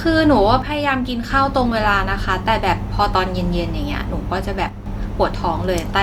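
From 0.62 to 1.30 s the speech abruptly drops by about 6 dB, then returns. It happens again from 4.69 to 4.86 s. The likely cause is one channel dropping out. With one stereo side gone, the mono sum loses half its shared signal.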